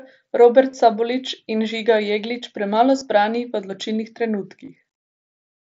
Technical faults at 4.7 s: concealed Bluetooth headset packet loss

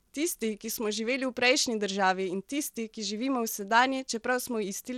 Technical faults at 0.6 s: Bluetooth SBC compression

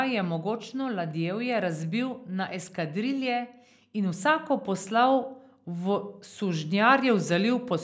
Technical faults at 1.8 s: none

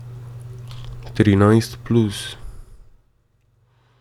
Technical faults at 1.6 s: none

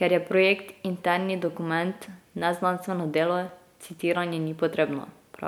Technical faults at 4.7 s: none

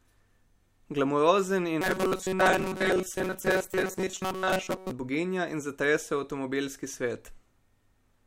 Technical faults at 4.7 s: robotic sound from repeated short buffers

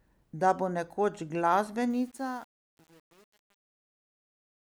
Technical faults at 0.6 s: none

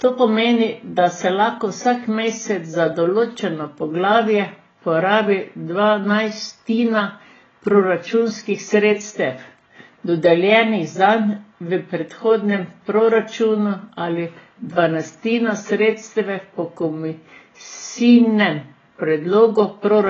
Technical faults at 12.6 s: AAC compression

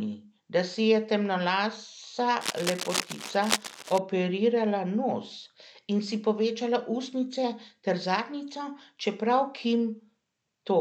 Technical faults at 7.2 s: none

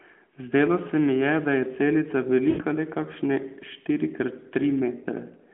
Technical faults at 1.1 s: none

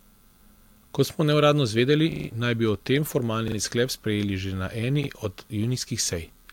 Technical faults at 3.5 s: repeated buffer

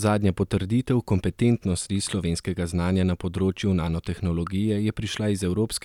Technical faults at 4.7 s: none

